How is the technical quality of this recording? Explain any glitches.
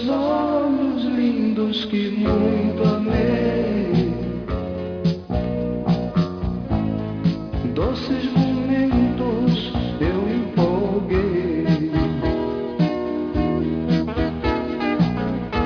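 No glitches or faults heard.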